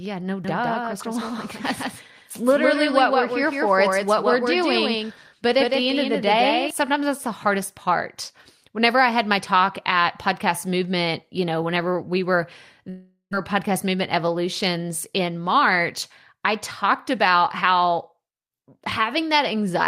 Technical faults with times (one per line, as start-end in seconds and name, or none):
0.44-6.70 doubled audio track
12.89-13.35 long network dropout